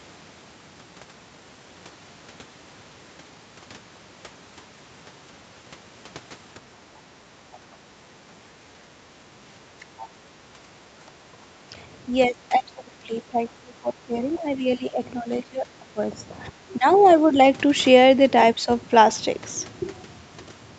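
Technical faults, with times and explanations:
9.02–9.19 s, background gated by the echo canceller: while the loudspeaker played, the canceller turned the microphone down hard, so the room sound dips by about 10 dB for a brief moment.
9.98–10.08 s, other side's voice leaking through: a faint second voice, about 25 dB below the talker, can be heard, likely because the echo canceller left some loudspeaker sound in the microphone signal.
11.4–11.47 s, 12.07–15.98 s, 16.48–17.36 s and 18.56–18.68 s, speech suppressed in double talk: the talker's voice dips in pieces, by up to about 20 dB in the long middle stretch, likely because the canceller could not separate the talker from the loudspeaker echo during overlapping talk.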